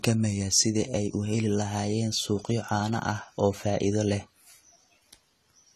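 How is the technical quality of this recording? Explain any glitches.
Plainly audible codec damage runs through the whole recording. The speech sounds dull and smeared throughout, with fizzy, warbling sibilants and nothing above 14 kHz. This is likely AAC compression starved of bits, consistent with about 32 kbps.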